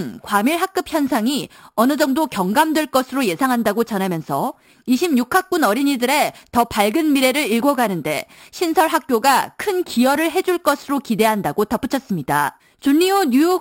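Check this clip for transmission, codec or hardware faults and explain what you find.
There is one fault, imaging from sample-and-hold upsampling, and it runs through the whole recording. The speech was raised to a higher rate by repeating each sample with no smoothing filter. The sound fits a move from 12 kHz to 44.1 kHz. Mirror copies of the speech spectrum fold up around multiples of the old rate, and the first sits between 6 kHz and 12 kHz at about 17 dB below the speech. The result is a bright, metallic fizz that rises and falls with the speech.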